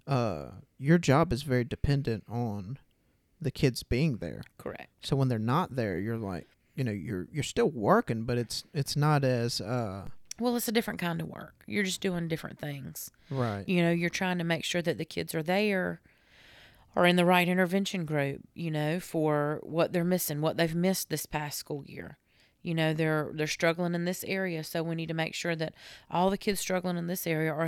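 The speech's zero line abruptly shifts by about -34 dBFS at 10.07 s, just before "well it's a different", and again at 26.52 s, after "sure that all the". Each DC step then bleeds away through a roughly 2 Hz high-pass, so it lands as a brief low thump under the continuing speech.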